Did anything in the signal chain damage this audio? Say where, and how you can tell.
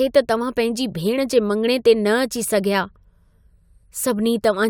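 No, nothing along the chain has left a mark on this speech that I can pick up, so there's no stage to point a finger at.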